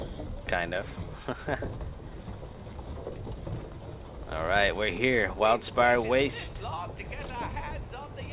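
No technical faults can be heard anywhere in the clip.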